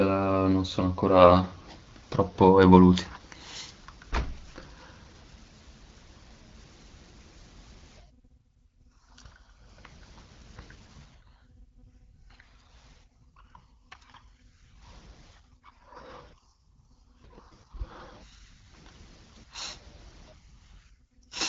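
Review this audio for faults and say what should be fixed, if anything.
Nothing here needs fixing: the speech has gone through an AMR wideband (HD Voice) codec at 12.65 kbit/s, which leaves the expected band limit with no content above 7.6 kHz.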